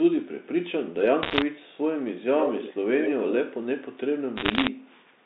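Bit errors on a digital phone line, 1.23 to 1.42 s: flipped bits in the coded samples, around one in a hundred, put sharp ticks and crackle over the speech.

Echo leak, 1.57 to 1.77 s: a faint delayed copy of the voice returns 137 ms late, far below the speech. The likely cause is a loudspeaker at the far end whose echo canceller let some of its microphone pickup back into the line.

Echo leak, 2.39 to 2.76 s and 3.01 to 3.32 s: the same kind of leak is much stronger here, with a copy 114 ms behind and nearly as loud as the speech.

Bit errors, 4.36 to 4.68 s: the tick-like crackle returns at a similar rate.

Echo leak, 4.79 to 5.01 s: a barely audible copy returns 114 ms late.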